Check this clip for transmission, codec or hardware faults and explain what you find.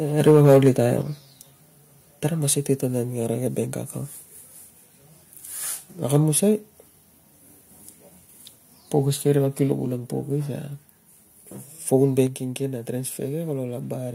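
Two faults recur in this speech clip: overload at the microphone and sudden drops in its input level.

Microphone overload, 0.26 to 0.69 s and 6.14 to 6.17 s. The input gain was likely set too high, pushing peaks about 6 dB, then about 2 dB, past the converter's ceiling. A few percent of samples are flattened, giving the loudest syllables a harsh, crackling edge.

Microphone volume stepped down, at 1.02, 9.72 and 12.27 s. The call software likely responded to the hot input by lowering the device's gain in a single step, by about 5, 3 and 4 dB. Voice and background both fall abruptly in level.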